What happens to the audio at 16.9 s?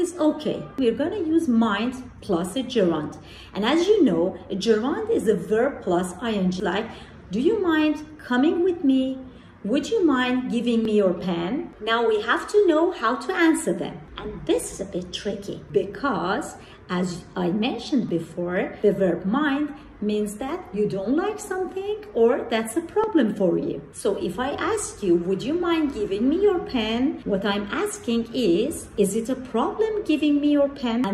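Nothing goes wrong at 16.9 s: the audio runs on intact through that moment, with no dropout, click or other fault.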